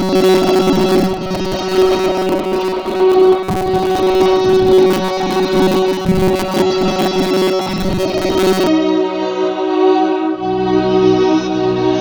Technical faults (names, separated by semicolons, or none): robotic sound from repeated short buffers